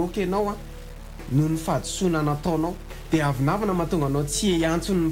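Throughout the clip the audio carries a grainy, signal-following distortion: quiet passages turn gritty and the faintest parts sputter or drop out. The likely cause is low bit depth without dither, about 6 bits rounded, leaving error roughly 25 dB below the signal. The waveform shows visible stair-stepping, and the spectrogram shows broadband haze that tracks the sound.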